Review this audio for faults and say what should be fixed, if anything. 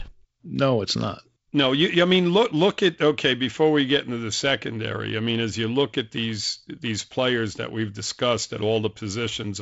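No faults found here, so nothing needs fixing.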